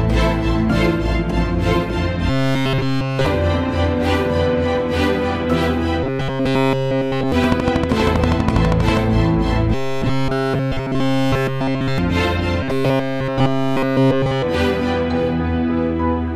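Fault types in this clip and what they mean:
Robotic sound from repeated short buffers: In four stretches, around 2.3, 6.0, 9.7 and 12.6 s, the sound turns into a rigid metallic buzz at 134 Hz. That fits a fragment of about 7.5 ms being looped. Audio likely arrived too seldom, so nearly everything there is repeats.
Train of clicks: From 7.44 to 8.98 s, about twenty evenly spaced clicks tick over the sound at 12.4 per second. They stand out roughly 15 dB above the signal. The likely cause is interference, or a faulty connection or power supply.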